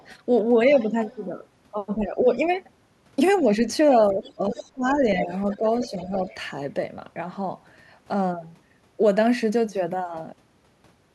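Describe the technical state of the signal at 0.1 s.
At 0.1 s the signal carries the other side's voice leaking through, which runs from the very start of the clip to 0.15 s. A second, separate voice sits faintly under the speech, roughly 35 dB below it. The likely cause is the far end playing on the talker's loudspeaker and the echo canceller leaving a residue in the microphone. Unlike reverberation, which smears the talker's own voice, this is a distinct second voice.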